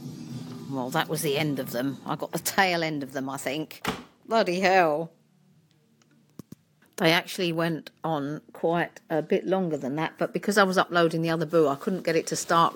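No technical faults can be heard anywhere in the clip.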